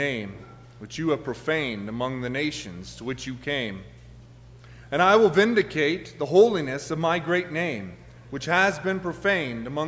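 No technical faults can be heard anywhere in the audio, and the signal stays continuous and stable throughout.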